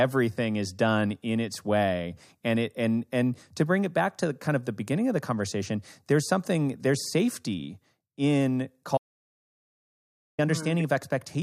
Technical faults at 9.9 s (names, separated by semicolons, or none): audio dropout to silence